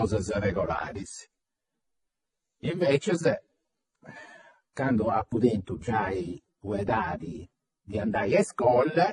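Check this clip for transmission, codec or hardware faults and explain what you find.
One codec fault runs through the whole speech clip. Throughout, the sound is dull, with nothing above 11.3 kHz and the artefacts of different codecs heard together. This likely comes from transcoding between lossy codecs: AAC-family encodes followed by MP3, each re-coding the last one's damage, at low bitrates around 24 to 48 kbit/s.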